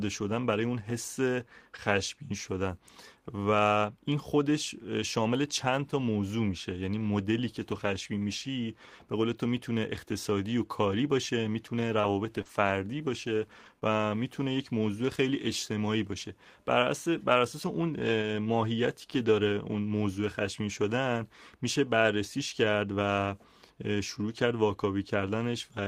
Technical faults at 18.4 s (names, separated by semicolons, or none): lost packet rebuilt from error correction